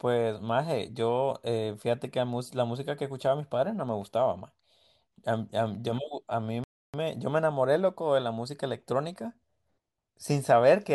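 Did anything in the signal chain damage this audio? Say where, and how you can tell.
Yes, a playback stall at 6.64 s to 6.94 s: the speech stops dead for 0.30 s, then resumes. The waveform shows a run of silence, and the spectrogram shows a blank vertical gap. The likely cause is the player's buffer running dry or its thread being blocked.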